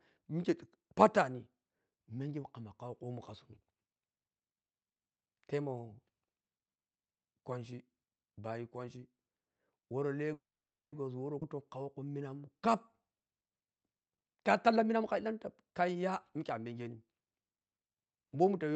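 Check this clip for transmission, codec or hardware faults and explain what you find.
Four timing faults from the network and jitter buffer appear between 10 and 17 seconds, over an Opus-style call path whose content stops near 8 kHz.

Call audio freeze, 10.33 to 10.94 s: the last sound smears briefly, then about 0.53 s of silence, a blank spectrogram column, likely from delayed packets draining the jitter buffer. Nothing is lost.

Skip ahead, 11.40 to 11.43 s: roughly a tenth of a second is dropped. The waveform splices almost directly, with an abrupt jump in the sound.

Jitter buffer slow-down, 11.56 to 13.03 s: repeated pitch periods add 113 ms, so the audio plays at 93% speed with unchanged pitch and stretched, evenly spaced harmonics.

Jitter buffer speed-up, 14.06 to 17.21 s: trimmed pitch periods remove around 0.7 s, so the audio plays at 119% speed with the same pitch and sounds hurried, with compressed spectrogram features.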